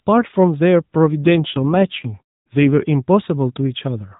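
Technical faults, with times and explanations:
1.24–2.72 s, AMR rate drop: the mobile codec steps down from 12.2 to 5.9 kbps, so the narrowband sound gets buzzier and more synthetic, with no gap or change in bandwidth, because the network is trading speech bits for error protection on a shaky link.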